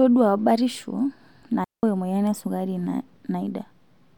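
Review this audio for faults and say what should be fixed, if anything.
At 1.64 to 1.83 s the speech drops into a clean, near-silent hole of about 190 ms with no noise burst: a digital wireless dropout, where the receiver mutes after losing too much data. Keep the transmitter in clear line of sight, close to the receiver, and away from crowded radio channels.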